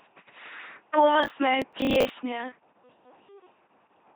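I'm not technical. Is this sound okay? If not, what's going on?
No. The whole clip of speech went through an LPC-10 vocoder, a very low-quality voice compressor, so it sounds buzzy and robotic, with nothing above about 3.8 kHz.

From 1.23 to 2.1 s, processor overload crackle. The computer fell behind, repeatedly replaying old scraps of audio in place of about twenty tiny chunks, each roughly a hundredth of a second. You hear harsh, gritty crackling.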